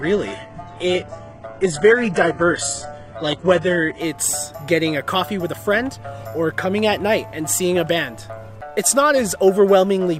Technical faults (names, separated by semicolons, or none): adaptive stream starting at a low bitrate